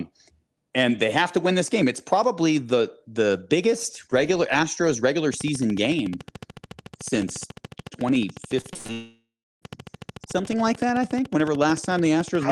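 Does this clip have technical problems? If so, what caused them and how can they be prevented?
Yes. From 5.34 s to the end, a steady ticking runs over the speech and through the pauses, about 13.8 evenly spaced clicks per second, with peaks a little louder than the speech itself. A train of clicks this regular and uniform most likely comes from electrical interference from nearby equipment or a faulty connection or power supply. Moving the interface away from noisy equipment and using a shielded cable and a stable USB port or driver should prevent it.

Between 8.61 and 8.91 s the speech turns choppy, with four short holes, the longest about 80 ms. About 140 ms of audio is missing, and nearly half of the stretch is filled with synthetic continuation. This is repeated packet loss: packets kept arriving late or not at all, and each gap was patched by stretching the last sound before the next one struck. 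A wired connection or more network headroom and a deeper jitter buffer would prevent it.

Right after that, from 8.93 to 9.64 s, the sound smears into a fading buzz and then drops to silence for about 330 ms before the speech resumes with a piece gone. This is a long network dropout, in which about 700 ms of audio never arrived. The receiver extended the last sound until that ran out, and the likely cause is a brief stall in the connection. A stable wired link and forward error correction or redundancy in the call settings help prevent it.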